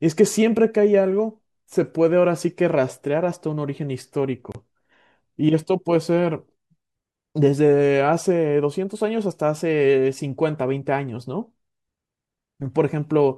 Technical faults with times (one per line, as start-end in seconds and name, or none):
4.52-4.55 gap at a join of encoded pieces